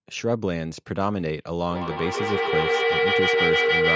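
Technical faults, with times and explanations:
1.71 to 3.96 s, feedback howl: A tone around 500 Hz builds up from repeats about every 150 ms. It peaks about 5 dB above the speech and lasts to the end. A microphone picks up a nearby loudspeaker on the same call, so each pass adds level.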